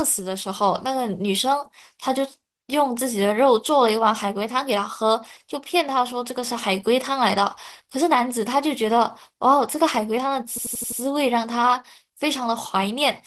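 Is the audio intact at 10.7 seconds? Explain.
No. A system hang loop runs from 10.58 to 11.01 s. The machine stalled while the sound hardware kept replaying one ring buffer. An 85.33 ms piece repeats five times at 11.7 Hz, a machine-gun stutter that fits a 4096-sample buffer.

Opus voice compression also affects this moment, as it does the whole clip. The coder pairs linear prediction with a layer for the upper band, and the excitation is coded coarsely. The speech sounds muffled, hoarse and slightly robotic, which points to a bitrate around 16 kbps.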